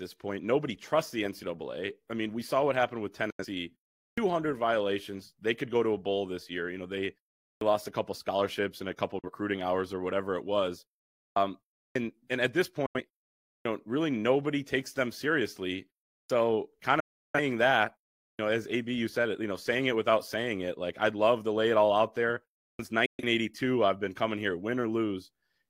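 Digital broadcast dropouts occur at 3.30, 9.19, 12.86, 17.0 and 23.06 s. The receiver mutes over failed frames with a 3 ms fade, losing up to 341 ms at 17.0 s, which fits roughly eight frames.

Clipped starts after a pause occur at 4.10, 7.55, 11.30, 11.88, 13.58, 16.23, 18.32 and 22.72 s. After pauses of about 0.4 s, the sleeping output device swallows 63 to 76 ms, so sound begins abruptly.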